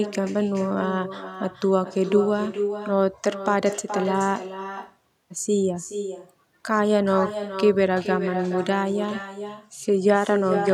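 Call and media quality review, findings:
Echo with no canceller, throughout. Every phrase shadowed by a thinner copy about 9 dB down, trailing by roughly 0.4 s. Far-end loudspeaker leaking into its microphone; acoustic echo cancellation absent or bypassed, so the round trip returns.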